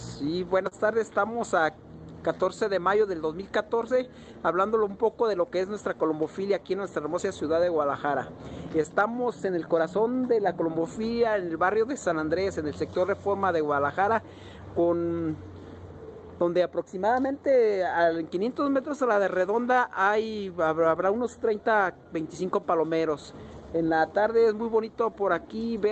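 Clock drift between sender and receiver runs through the whole clip. The sending side's clock runs roughly 3% slower than the receiver's, so the jitter buffer keeps draining. The receiver has to compensate continually, and the timing never settles, with small hiccups recurring at uneven intervals.

Repeated timing corrections run from 0.18 s to 25.78 s. Because the sender is slow, the receiver keeps stretching short pieces rather than cutting them, so playback runs at about 98% speed and adds roughly 0.7 s in total. Each edit is slight and unevenly spaced, heard, if at all, as slight hiccups or an unsteady tempo.

A short stall from a late packet occurs between 0.68 s and 0.75 s. A packet missed its slot, the buffer ran empty, and the receiver held the last sound for 33 ms until it arrived, then resumed where it had stopped. Nothing is lost, but that moment lingers with a faint buzz or dip. 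The delay steps up by 33 ms at the same time. All of this sits on an Opus call path whose 8 kHz bandwidth trims the top end, consistent with a bitrate around 24 kbps.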